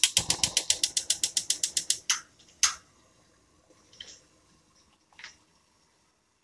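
No technical faults can be heard anywhere in this recording of sounds. Nothing in it calls for a time mark or a fault description.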